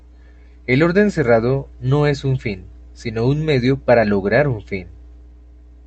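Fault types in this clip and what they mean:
No faults present in this clip.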